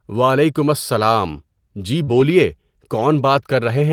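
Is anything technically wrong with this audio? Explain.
Yes. Two closely overlapping packet-loss faults disturb the speech just after 2 s.

From 2.03 to 2.09 s there is a brief smear where the speech seems to hang on its last sound and wobble before blending back. This is short concealed packet loss. About 40 ms of audio never reached the decoder in time, so the receiver extended the preceding sound, as a pitched continuation if voiced or as shaped noise if not, and then faded back into the real signal.

From 2.07 to 2.21 s the speech turns rougher and grainier without any gap. This is a lost packet rebuilt from error correction. The originals were lost, but each following packet carried a low-bitrate backup copy. The decoder played those copies for about 80 ms, which fits four separate packets, producing this coarser, noisier stretch.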